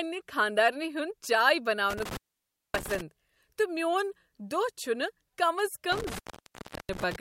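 Intermittent contact breaks the speech twice, from 1.90 to 3.01 s, just before "تہٕ میون", and from 5.92 to 7.16 s, as a loose connection opens for 0.58 s and 0.70 s. Crackle marks each edge and faint hiss fills the gap, unlike a clean digital dropout.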